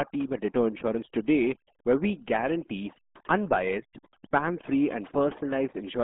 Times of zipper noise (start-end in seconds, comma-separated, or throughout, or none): none